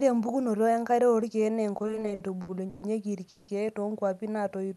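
Repeated stalls (stutter) run from 1.77 to 2.83 s. Eleven times, the late audio ran out and the last sound was stretched, up to 130 ms each, so the speech drags and stutters with nothing lost.

A call audio freeze follows at 3.29 to 3.49 s. The sound hangs as a fading buzz for about 190 ms before resuming where it stopped, likely because packets were held up and the jitter buffer emptied.

Jitter buffer slow-down closes the clip from 4.42 to 4.75 s. Repeated pitch periods add 49 ms, so speech plays at 87% speed at unchanged pitch, drawn out against the 12 kHz-limited Opus call sound.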